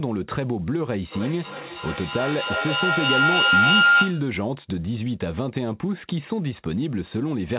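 From 1.12 s to 4.39 s, the microphone-to-loudspeaker loop between two devices in the same room ran with more than unity gain, producing a feedback howl. Each pass through the loop came back louder, so the repeats grew rather than decayed and narrowed to a tone of about 1.5 kHz. The loop's round trip is roughly 300 ms, and the tone peaks about 8 dB above the speech, all within a band that stops at 4 kHz, which fits a narrowband 64 kbps call codec.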